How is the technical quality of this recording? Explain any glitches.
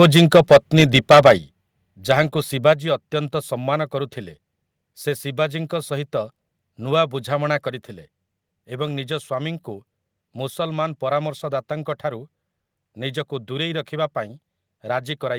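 The recording has two audible problems at the start: clipping distortion, then two sudden level drops.

From 0 to 1.32 s there is microphone overload. Peaks run about 10 dB past full scale and roughly one sample in twenty is flattened, giving the loudest syllables a harsh crackle, likely from excessive input gain.

At 1.38 s and 2.73 s the microphone volume steps down, by about 7 dB and then 4 dB, the second just before "ଅତ୍ୟନ୍ତ ସମ୍ମାନ କରୁଥିଲେ". Voice and background drop together, likely from call software reducing input volume after the distortion.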